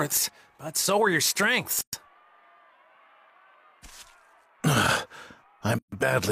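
Gaps at a join of encoded pieces cut in at 1.81 s (120 ms) and 5.79 s (138 ms). Untrimmed encoder padding leaves dropouts with smeared edges that show as blank columns.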